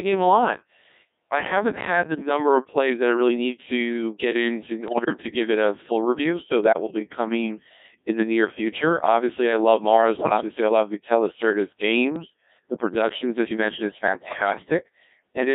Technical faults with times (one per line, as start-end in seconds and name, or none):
0.00-15.55 Codec 2 vocoder
2.14-2.29 bit errors on digital voice radio
4.88-5.22 bit errors on digital voice radio
6.64-6.99 bit errors on digital voice radio
10.16-10.48 bit errors on digital voice radio
12.16-12.30 bit errors on digital voice radio
14.08-14.54 bit errors on digital voice radio